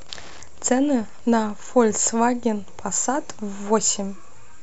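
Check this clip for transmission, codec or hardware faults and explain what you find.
One hardware fault is present. From 0.0 to 2.0 s, Wi-Fi interference produces a steady tick every 102.4 ms, roughly ten per second, about 30 dB below the speech. It comes from a nearby radio's beacon being rectified by the audio circuit.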